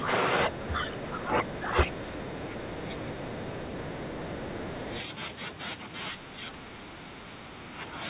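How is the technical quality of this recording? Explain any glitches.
The recording has clear echo-control faults: the speech is repeatedly turned down while both sides talk, and the far end's voice bleeds through. The call path's narrow band stops near 4 kHz.

Speech suppressed in double talk occurs at 0 to 0.1 s, 0.47 to 3.34 s, 4.21 to 4.93 s and 6.12 to 7.98 s. The echo canceller, likely unable to tell the local talker from loudspeaker echo, pulls everything down. The voice dips by roughly 20, 15, 5 and 10 dB.

The other side's voice leaks through from 1.44 to 5.02 s. The canceller likely left some loudspeaker playback in the microphone signal. The result is a second voice sitting around 15 dB below the main talker.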